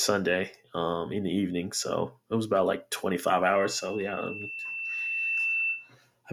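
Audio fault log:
3.53–5.92 s, loudspeaker feedback squeal: a steady 2.7 kHz tone swells over about two seconds to roughly speech level, as microphone and loudspeaker form a loop exceeding unity gain there.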